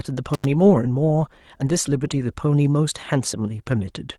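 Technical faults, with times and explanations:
0.34–0.45 s, intermittent contact: the speech cuts out for about 86 ms, with a crackle as it breaks off and again as it returns, leaving only faint hiss in the gap, the sound of a loose plug or cable briefly opening the signal path.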